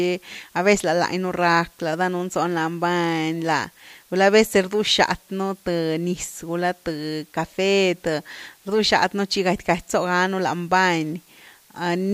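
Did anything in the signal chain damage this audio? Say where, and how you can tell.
Yes. The damage sits at a sample-format conversion stage, where the speech was requantised to a very short word length with dither applied first. Across the whole clip there is a constant, even hiss with no grittiness or distortion on the speech itself, and its level sits roughly 35 dB below the signal, which fits about 9 bits. This is low bit depth with dither: the dither turns the rounding error into steady white noise instead of signal-dependent distortion.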